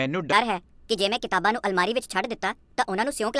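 Wrong sample rate from 0.33 s to the end: the speech runs about 1.38 times too fast and sits roughly 5.6 semitones high, sounding hurried and chipmunk-like. Speed and pitch rise together with no conversion, which fits 16 kHz audio played back at 22 kHz.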